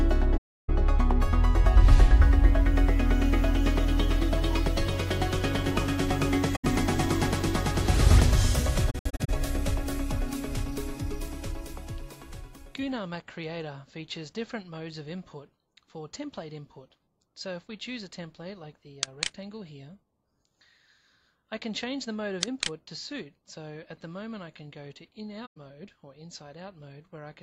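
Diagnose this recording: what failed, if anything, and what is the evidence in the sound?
AAC frame loss with muting in the codec path: the decoder zeroed lost frames. Soft-edged holes appear at 0.37–0.70 s, 6.55–6.65 s and 25.46–25.57 s, plus scattered gaps across 8.90–9.30 s, the longest about 70 ms, faded by overlapping windows.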